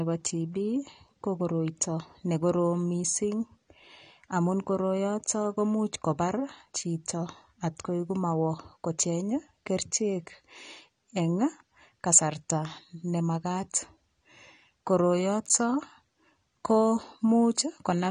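From start to finish the speech sounds dull and smeared, with nothing above 9.7 kHz. Sibilants turn fizzy and sustained sounds warble. Plainly audible codec damage of this kind most likely comes from AAC compression, AAC-LC at a low bitrate, perhaps around 32 kbps. The encoder spends too few bits on each frame. It cuts the top of the spectrum, leaves gaps, and fills some bands with substitute noise.

At 15.46 to 15.50 s the audio briefly jumbles. This is chunks out of order. Short pieces of audio, each 10.67 ms long, are played in the wrong sequence. The misplaced piece seems to land about three pieces late. Nothing is missing, but three hard edges meet where the sequence breaks.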